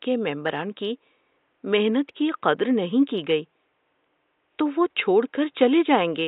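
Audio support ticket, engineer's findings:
No fault found; faint room noise well below speech.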